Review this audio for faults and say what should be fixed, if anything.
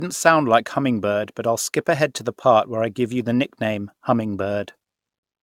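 The speech has a swirly, smeared, hollow quality from start to finish, and consonant attacks come out soft and blurred. That's more damage than a single encode at a decent rate would leave, so it's likely generation loss. The sound fits a lossy codec like AAC-LC at around 96 kbit/s, decoded and re-encoded about five times. Each pass requantises on a shifted frame grid, so the noise stacks up. To avoid it, work from a lossless master and encode to the lossy format only once, at the very end.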